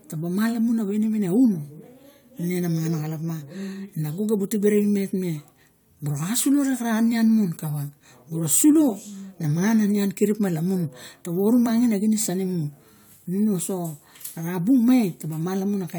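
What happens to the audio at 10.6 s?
At 10.6 s the speech carries on without any audible fault.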